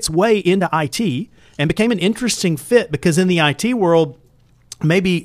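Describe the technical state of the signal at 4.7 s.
At 4.7 s the speech signal is intact, with no dropout, click, clipping or other fault audible at that point.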